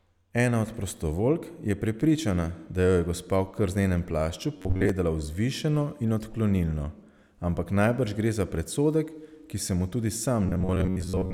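Speech in which new audio likely stopped arriving in time, so the playback side kept looping its last short block instead of moving forward, which gives robotic sound from repeated short buffers. The repeats set a fixed buzz near 94 Hz, pointing to a block of roughly 10.7 ms, and most of the real audio is skipped. The voice turns into a stiff metallic drone from 4.57 to 4.89 s, and again from 10.46 s, right after "ki se mu tudi", until the clip ends.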